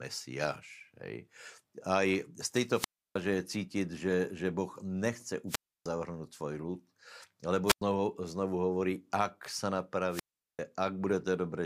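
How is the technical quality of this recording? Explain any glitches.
The recording suffers four wireless microphone squelch dropouts, at 2.72–3.19 s, 5.47–5.86 s, 7.66–7.82 s and 10.09–10.61 s. Each time, the radio link fades, hiss swells, and the receiver's squelch cuts the output to near silence for about 0.31, 0.30, 0.10 and 0.39 s before the speech returns. Unlike a digital packet loss, which stops abruptly without warning, each gap here is preceded by rising static.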